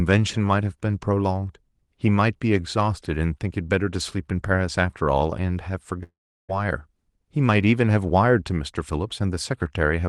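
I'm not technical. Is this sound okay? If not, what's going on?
No. From 6.03 to 6.51 s, a likely long network dropout stopped the speech arriving. You hear a fading buzz, then near silence, and that half-second is lost.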